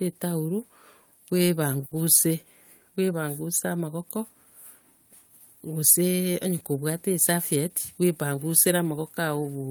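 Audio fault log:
1.85–1.93 s: short stall from a late packet. A packet arrived late and the jitter buffer ran dry, so the receiver held the last sound for about 60 ms, then resumed exactly where it left off. Nothing is skipped, which separates it from a dropout or concealed loss: the sound is just drawn out briefly, with a faint buzzy or dipping quality, and the playback delay grows by the same 60 ms.
7.56–8.38 s: jitter buffer speed-up. Too much audio had built up in the buffer, so the receiver trimmed short pitch-period-sized pieces again and again, removing roughly 70 ms over this stretch. The speech runs at about 107% speed while the pitch stays unchanged, so it sounds slightly hurried rather than higher, unlike a resampling or clock-rate error, and no single gap stands out as a cut would.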